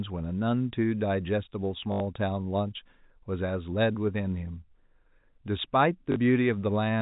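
At 1.92–2.00 s and 6.12–6.16 s, packet loss with last packet repeated loops audio into a robotic buzz near 50 Hz, fitting 20 ms packets, rather than silence.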